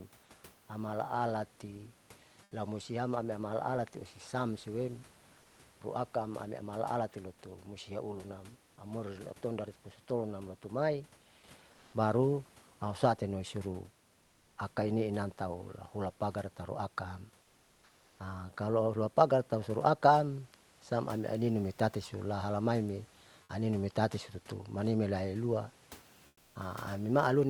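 The sender's voice detector likely stopped transmitting during speech pauses, as with Opus discontinuous transmission, and the receiver filled each gap with comfort noise in place of the background. At 2.43–2.51 s, 5.41–5.59 s, 11.73–11.93 s, 17.43–18.19 s and 26.27–26.55 s the real room noise gives way to a smooth, featureless hiss. It is about 3 dB, 1 dB quieter, then about 2 dB louder, then about 3 dB and finally about 9 dB quieter than the background it replaces.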